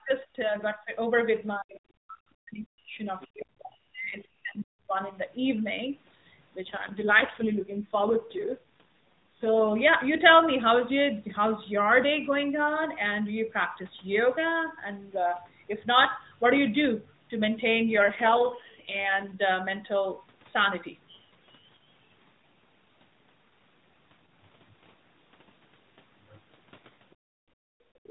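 Speech suppressed in double talk, 0 to 0.94 s: the voice dips by as much as about 30 dB for most of that span, likely because an echo canceller could not separate it from simultaneous far-end speech.

AMR rate drop, 6.62 to 9.74 s and again 17.92 to 19.40 s: the codec falls from 12.2 to 4.75 kbps with no gap or band change, so the voice turns rough and synthetic until the rate recovers.

Background gated by the echo canceller, 27.15 to 28.04 s: with loudspeaker playback present, the canceller pulls the microphone down hard, up to about 33 dB, so the room sound drops away for around a second.

Other side's voice leaking through, 28.04 s to the end: a faint second voice, roughly 15 dB below the talker, appears, likely because the echo canceller did not fully remove loudspeaker playback from the microphone.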